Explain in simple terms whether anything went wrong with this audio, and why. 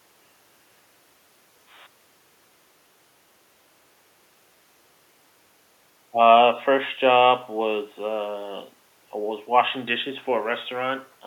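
Nothing went wrong with this speech recording. The faint background noise from the room sits far below the talking and is simply part of where the microphone was.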